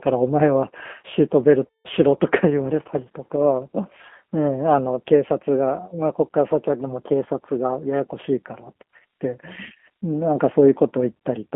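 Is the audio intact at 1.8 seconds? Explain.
No. From 1.67 to 1.88 s there is VoIP packet loss concealed by the speech codec. About 180 ms of audio, which fits roughly six lost packets, was never received, and the decoder filled the gap by repeating its last pitch and filter at falling gain. The result is a buzzy or noisy, fading stretch, and the following frames stay weak briefly.

The moment also carries the G.729 codec, which applies to the whole clip at 8 kbit/s. The speech is rebuilt from a vocal tract filter and sparse pulses within a line band of roughly 200 Hz to 3.4 kHz, which makes it plainly rough and synthetic.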